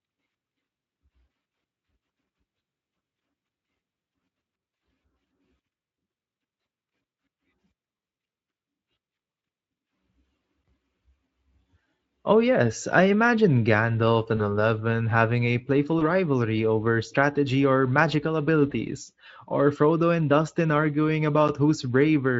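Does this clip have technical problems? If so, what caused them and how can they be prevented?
Yes. VoIP packet loss concealed by the speech codec occurs three times: 14.37 to 14.42 s, 15.99 to 16.03 s just before "rivalry over strategy or", and 18.69 to 18.73 s just after "over strategy or magical". Each gap fits one lost 20 ms frame. The Speex-style decoder fills it by repeating its last pitch and filter at falling gain. That gives a brief buzzy tone or coloured noise that fades. The sound stays weak or distorted for a moment afterwards. A jitter buffer with forward error correction or redundant packets would prevent this.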